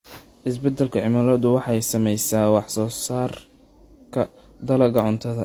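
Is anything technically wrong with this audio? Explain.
Yes, throughout the speech there are signs of transcoding between lossy codecs, likely an HE-AAC encode at around 32 kbit/s later re-encoded to Opus at around 48 kbit/s. The second codec spends bits on the first one's artefacts, so both sets of coding smear and swirl are heard together, with nothing above 20 kHz.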